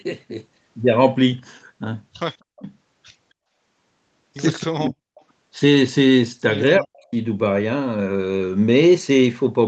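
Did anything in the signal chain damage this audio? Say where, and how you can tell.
Yes. Speech suppressed in double talk is audible three times, at 2.41 to 2.63 s, 4.63 to 5.16 s and 6.78 to 7.14 s. In each stretch the talker drops away sharply, by about 40 dB at the deepest point, for roughly a fifth, half and two fifths of a second. This happens in the call processing stage. The likely cause is an echo canceller that, with both ends talking at once, could not tell the near talker from loudspeaker echo and attenuated everything.

An echo leak follows right after the middle dropout, from 5.15 to 5.21 s. It is a brief, faint trace of delayed sound, about 35 dB below the speech, trailing the original by 272 ms. That delay points to a loudspeaker-to-microphone path on one side of the call. This is again a call processing fault, likely from that side's echo canceller letting a scrap of what it picked up slip through and get sent back.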